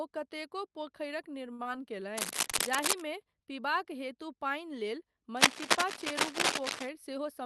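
Just after "कतेको पोखरिक", from 1.53 to 1.61 s, there is a short stall from a late packet. The jitter buffer ran dry, so the receiver held the last speech sound for about 54 ms until the packet arrived, then continued from the same point without losing anything. The sound is unnaturally sustained, with a faint buzzy dip. On a spectrogram the harmonics run flat and smeared across that span. In the waveform, the periods repeat with slightly falling amplitude.

Immediately afterwards, at 1.63 to 1.67 s, comes a short concealed packet loss. About 20 ms of audio never reached the decoder, and the gap was filled by extending the preceding sound and blending back into the real signal. It sounds like a quick smear or wobble. On the spectrogram there is a blurred patch where detail briefly disappears. In the waveform, a short stretch of copied cycles meets the true signal at a slight seam.

Cable scratch noise appears from 2.17 to 3.01 s, ending just before "पीबाक हेतु", and again from 5.37 to 6.89 s. 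It is likely caused by a worn cable or connector being moved, with its contact resistance fluctuating quickly. The result is scratchy, rustling bursts, about 5 dB above the speech in the first stretch and about 10 dB above it in the second. On a spectrogram these look like irregular broadband vertical streaks. In the waveform they appear as dense, jagged spikes over the speech. The streaks stop at the 12 kHz upper limit of the Opus call path.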